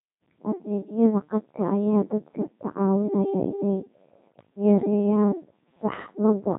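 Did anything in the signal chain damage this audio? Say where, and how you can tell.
Yes. The damage is at the codec stage: the whole clip has passed through the Codec 2 vocoder, and heavily. The speech is buzzy and robotic throughout, which fits a 2.4 kbit/s mode. Only pitch, voicing, energy and a spectral envelope survive, and the decoder rebuilds the voice from sine waves rather than the original waveform.

There are also bit errors on digital voice radio in the transmission path, from 4.28 to 4.50 s, right after "dadka ka caawinaya inay". Pitch, level and timbre lurch into warbling gibberish for about eight frames. That points to roughly 7 percent of bits flipped, each corrupting a whole frame's parameters.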